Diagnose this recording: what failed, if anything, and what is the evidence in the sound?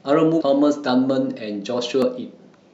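The fault lies in the codec stage, where damaged data in a compressed stream corrupts decoding of the speech. Two brief blips occur, one from 0.40 to 0.42 s and a shorter one at 2.02 s. Bad bytes in the file made the decoder misread those frames and lose sync until it found the next valid frame header. Unlike a network dropout, which leaves a gap or a smooth concealment fill, these come from the decoder misreading corrupted frames.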